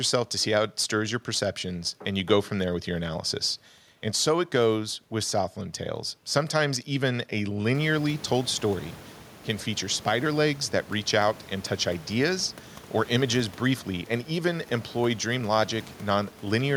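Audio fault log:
Nothing in this speech clip needs logging. The room's background noise jumps by about 20 dB around 7.5 s but still sits roughly 22 dB under the speech, and that's just the space the microphone is in.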